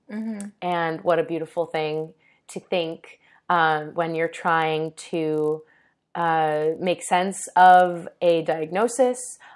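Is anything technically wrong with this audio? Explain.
Yes. Throughout the speech, a resampler restarted on every block converts 48 kHz to 24 kHz in isolated 20 ms chunks. Each edge gets a small error, heard as a 50 Hz buzz only while speech sounds. The spectrogram shows faint vertical lines every 20 ms.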